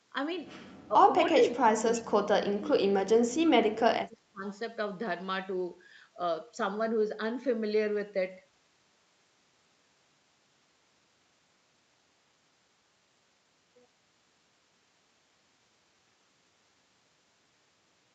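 Speech that dips and breaks up: a brief, shallow dip of about 10 dB at 0.88 to 0.96 s, then much deeper cuts of about 35 dB across 1.33 to 2.28 s and about 30 dB across 2.52 to 4.44 s. This is likely speech suppressed in double talk, with the echo canceller turning down the near talker while the far side spoke. At 1.94 to 2.0 s a faint scrap of the voice returns about 310 ms late, around 25 dB below the speech, likely an echo leak from a loudspeaker whose echo canceller let part of the pickup through. The band stops at 8 kHz, consistent with a wideband Opus call path.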